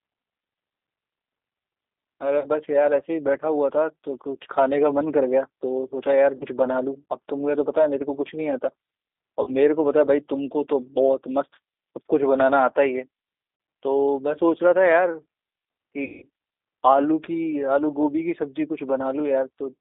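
A speech recording carried over a G.729 codec link, with the rough, slightly synthetic texture of 8 kbit/s speech coding plainly audible throughout. The line band runs from 300 Hz to 3.7 kHz, so a spectrogram shows a hard ceiling with nothing above 3.7 kHz and an empty strip below 300 Hz, and consonants lose their crispness. Because the codec rebuilds speech from a vocal tract filter, a pitch predictor and a few pulses per frame, fine detail is coarsened into that characteristic roughness.

VoIP packet loss concealed by the speech codec breaks the audio at 2.40–2.48 s, 6.37–6.45 s, 9.43–9.53 s, 13.56–13.60 s and 16.04–16.26 s. The first four gaps each lose 40 ms and the last loses 180 ms. At each one the decoder repeats its last pitch and filter at falling gain, stretching the sound into a buzzy tone or coloured noise that fades. On a spectrogram this appears as frozen horizontal harmonic stripes that dim, and on the waveform as a repetitive, shrinking envelope. 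The longest and weakest stretch is at 16.04 s.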